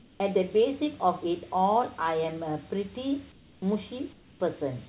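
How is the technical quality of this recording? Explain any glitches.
Technical quality is compromised by two faults: a persistent high whistle and three brief patches of substituted background. The audio is band-limited to about 4 kHz, consistent with a narrowband G.711 call path.

Switching supply whistle, throughout the clip: a switching power supply oscillating in an audible range produces a thin tone wandering between 7.65 and 7.73 kHz, about 15 dB below the sound.

Comfort noise in place of the background, at 0.0–0.2 s, 3.32–3.62 s and 4.13–4.4 s: the real background gives way to steady, featureless noise about 2 dB quieter in the first gap and about 4 dB quieter in the other two. The likely cause is discontinuous transmission, with the receiver synthesising filler noise while the sender was silent.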